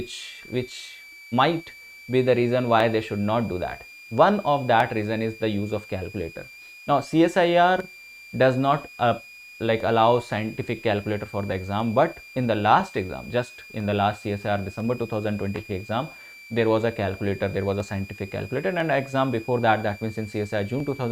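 A thin, high whistle drifting between about 2.3 and 2.48 kHz sits roughly 20 dB below the audio throughout: switching supply whistle from a power supply running in audible burst mode or beating with another one.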